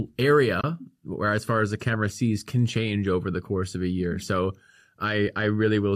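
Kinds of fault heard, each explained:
AAC frame loss with muting: coded frames never reached the decoder, which filled their spectrum with zeros, so the overlapping transform windows fade the speech out and back in instead of cutting it hard. From about 0.61 to 0.64 s a 30 ms hole opens, which fits three lost 10 ms frames of what is likely low-delay AAC. At 5.28 s a single 10 ms frame drops out. Both gaps are brief, soft-edged dips.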